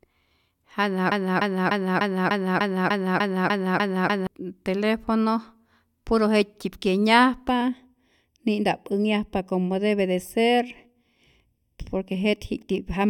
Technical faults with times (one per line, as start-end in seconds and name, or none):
1.12-4.27 broken-record loop
7.49-13.10 channel delay (comb filtering)